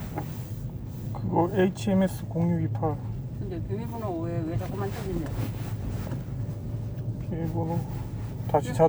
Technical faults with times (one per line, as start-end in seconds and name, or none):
none